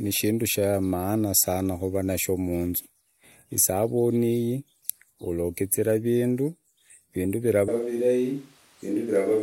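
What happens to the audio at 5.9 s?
At 5.9 s the speech carries straight through with no dropout, click, distortion or other audible fault.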